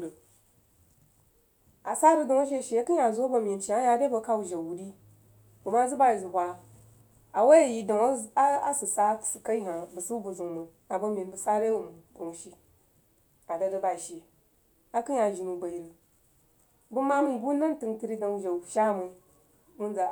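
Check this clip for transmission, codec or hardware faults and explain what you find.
Nothing to flag here; I gave the whole recording a good listen and didn't hear a single fault anywhere in it.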